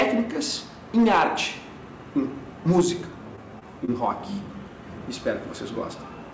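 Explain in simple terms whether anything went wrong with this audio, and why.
Yes, two things. Hard clipping at 0 to 0.04 s, 0.97 to 1.43 s and 2.69 to 2.87 s: the sound got too loud, so its peaks were chopped flat, giving crackle on the peaks.

Then short concealed packet loss at 3.36, 3.59 and 3.85 s: little chunks of the call arrived too late, and the receiver faked the gaps by stretching the previous sound, so you hear brief smears.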